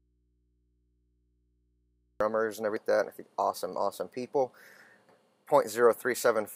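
The audio opens already in a dropout to a faint residue. From the start until 2.2 s, the wanted sound is absent. Only a low mains hum remains, roughly 45 dB below the normal level. The sound then returns abruptly, with no fade. The likely cause is a lost input signal while the path after the break stayed live, so the open input carried hum. Damaged data in a compressed stream follows, at 2.77 s and again at 5.09 s. Each is a short blip or chirp. At each point the decoder met corrupted frames, lost sync and had to find the next frame header. That produces the brief burst.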